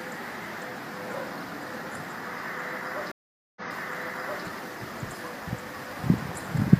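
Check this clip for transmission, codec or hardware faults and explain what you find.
There is one fault, a stream reconnect between 3.12 s and 4.44 s. The audio stops dead for 445 ms, then comes back about 0.88 s earlier than where it broke off, so a stretch of sound is heard twice. That happens when the connection drops, the player reconnects, and the server resends a burst of already-played audio to a freshly started decoder, whose first frame or two come in muted or faded. The repeat and the soft restart set it apart from an ordinary dropout, which skips ahead or resumes abruptly.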